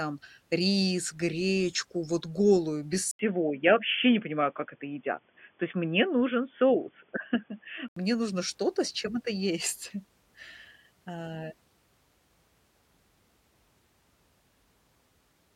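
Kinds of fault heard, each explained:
Input switched to a poorer device: after "гречку вот голую без", at 3.1 s, an 80 ms gap opens, then the speech turns boxy with nothing above 3.4 kHz and a faint new noise floor, level unchanged, until "мне нужно" at 8.0 s; the gap and new noise point to a likely device change rather than mere filtering.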